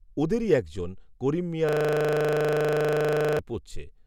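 Right after "ওঁদেরই এক জন করিম", from 1.69 to 3.39 s, there's a system hang loop: a 40 ms slice repeats 43 times, giving a rough 25 Hz buzz.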